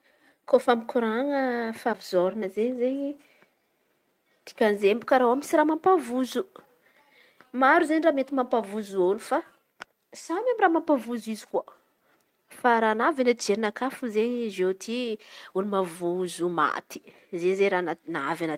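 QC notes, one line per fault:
No fault found, so there are no QC notes to add.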